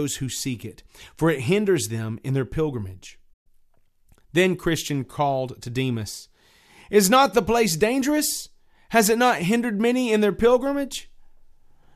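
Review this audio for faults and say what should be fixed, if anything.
At 3.33 to 3.47 s the receiver stopped getting valid frames and muted, causing a digital broadcast dropout. The speech fades to silence over 8 ms and 120 ms of programme is lost outright, which fits a handful of dropped frames. Better signal margin or stronger error protection on the link would prevent it.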